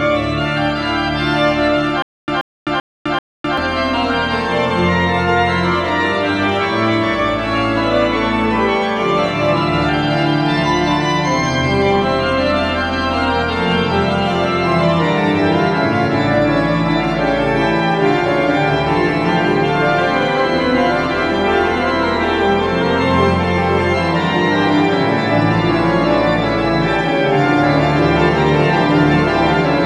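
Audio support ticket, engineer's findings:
Stutter with silent gaps, 2.02–3.58 s: 132 ms burst repeats four times, 256 ms digital silence between. Likely stream stall replaying last fragment; intervening audio lost.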